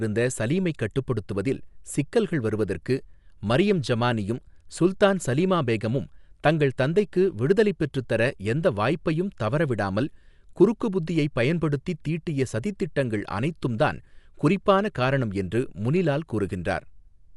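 From start to finish the speech sounds dull, with rough, fluttering noise around voiced tones, likely Dolby Digital compression at a bitrate near 64 kbps. A spectrogram shows nothing above 11.6 kHz, plus speckled, noisy gaps between harmonics where starved bands were filled.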